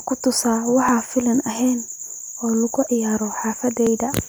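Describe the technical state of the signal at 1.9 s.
The recording path likely works in 1-second chunks and dropped a few milliseconds of audio while handing over between chunks, leaving audio missing between chunks at 1.88 s. The two sides butt together with no gap, so the speech jumps forward by a tiny skip.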